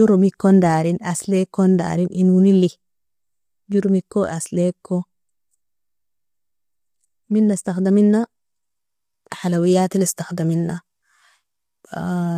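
Right from the start and all the way through, the speech has a rough, grainy edge, with hiss filling the gaps between harmonics and a thin, synthetic top end. That's likely low-delay AAC compression: short frames blur pitch detail, and the damage fits a bitrate around 32 kbps.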